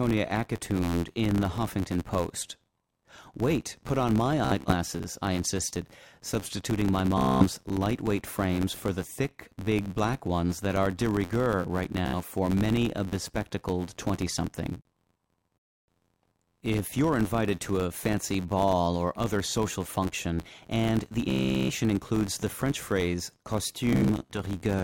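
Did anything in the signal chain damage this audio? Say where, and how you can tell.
Yes. A filter restarted on every block puts an 86 Hz buzz under the speech throughout. That fits a 512-sample buffer stage, where each block restarts from silence.

Bluetooth stutter occurs at 4.45, 7.18, 12.06, 21.29 and 23.93 s. Lost wireless packets make short slices repeat as a machine-gun buzz. The speech then resumes further on.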